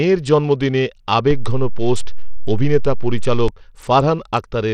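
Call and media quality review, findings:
Bluetooth SBC compression, whole clip. Speech treble thin and flickering, gritty noise and aliasing throughout. Damage plainly audible. Likely a low SBC bit pool, consistent with roughly 80 kbps. Upper sub-bands starved of bits, remaining bands coarsely quantised.

DC step, 1.31 s to 3.48 s. Low thump at 1.31 s as the waveform's zero line jumps. Offset holds, then a second thump at 3.48 s as it steps back. Probable converter recalibration or offset input switched in. Speech unaffected between.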